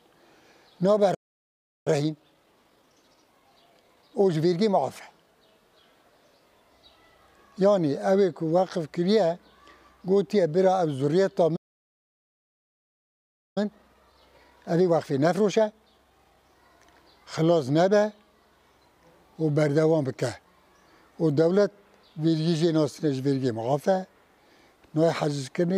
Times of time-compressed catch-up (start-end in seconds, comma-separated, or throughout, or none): 1.87-4.73, 13.58-16.58